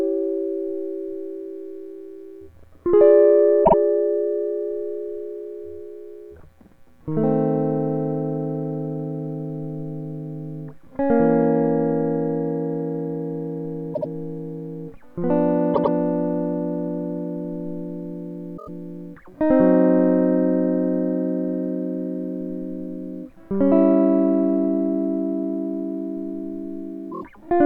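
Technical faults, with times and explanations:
3.64–3.74 s, 13.93–14.08 s, 15.73–15.93 s, 18.57–18.69 s, 27.11–27.23 s: repeated frames. The music stutters, replaying a short slice two or four extra times. Blocks of 24 to 96 ms, which fits 24 ms compressed frames, were duplicated in the stream, each adding 96 to 192 ms.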